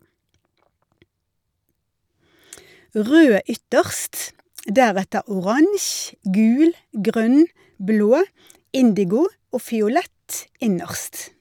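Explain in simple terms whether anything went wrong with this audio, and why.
Nothing went wrong here: across the whole clip no dropout, glitch or other playback fault can be heard.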